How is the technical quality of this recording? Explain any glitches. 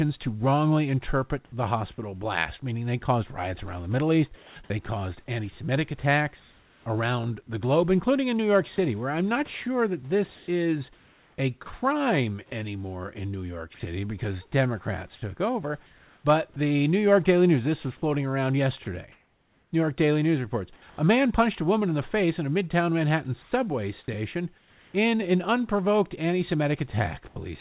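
The recording has one clear fault: the speech is chopped repeatedly from 1.46 s to 27.36 s, starting right after "to wrongly interpret". Over the whole stretch, about 3.02 s of real sound is missing.

Sound chopped by the voice detector, 1.46–27.36 s: the sender's voice detector likely switched transmission on and off, and the gaps were filled with comfort noise. Quiet syllables and word edges drop out.

The call path cuts everything above 4 kHz, which fits G.711 mu-law at 64 kbps, and the room noise sits about 40 dB below the speech.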